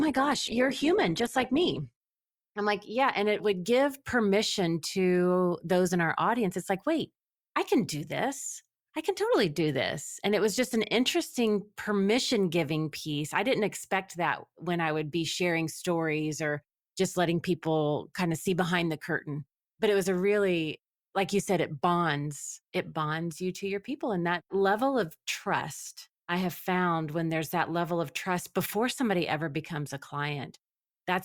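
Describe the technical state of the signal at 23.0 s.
At 23.0 s the speech signal is intact, with no audible technical fault at that moment.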